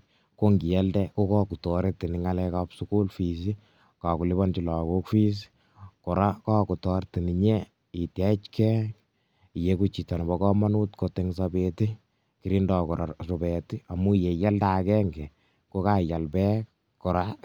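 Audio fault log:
Nothing to log here: no technical faults turn up anywhere in this speech recording.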